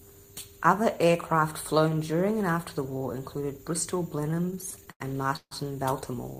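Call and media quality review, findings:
Repeated stalls (stutter), 4.21 to 5.53 s. Speech drags and hiccups through 15 short holds, longest 151 ms, about 370 ms padded in total, roughly 28% of that span. Jitter buffer running dry on late packets, receiver stretching the last sound each time. Nothing actually lost.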